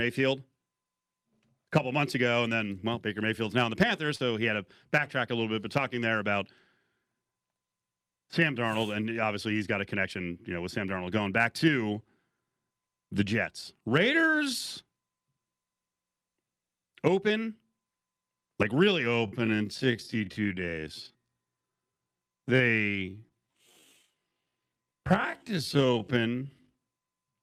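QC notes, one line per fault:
4.15–4.21 s, short concealed packet loss: a brief smear or wobble. About 40 ms of audio arrived too late to decode, and roughly 34 ms of it was filled by extending the preceding sound before blending back into the real signal.
19.06 s to the end, time-stretched section: the pace abruptly drops to about half speed (0.54×) while the pitch stays unchanged, which makes it drag. This is likely software stretching the audio by repeating short pieces to lengthen it while preserving pitch.
23.29–23.32 s, short concealed packet loss: a brief smear or wobble within the slowed stretch. About 20 ms went missing, and 12 ms of it was bridged by continuing the last sound before the real audio resumed.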